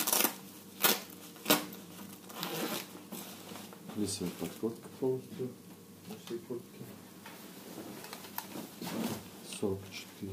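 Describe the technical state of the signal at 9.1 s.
Nothing at 9.1 s departs from a clean, continuous signal; the audio is intact at that moment.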